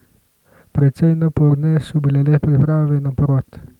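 No technical faults can be heard anywhere in the recording.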